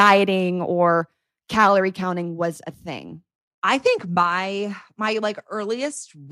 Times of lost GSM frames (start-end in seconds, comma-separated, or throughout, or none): none